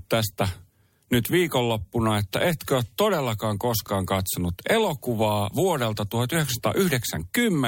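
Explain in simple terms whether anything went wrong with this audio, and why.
Around 3.84 to 3.88 s, right after "että etkö ole todellakaan", a brief chunks-out-of-order glitch happens: a 10 ms slice plays three slots late, causing a jumbled moment.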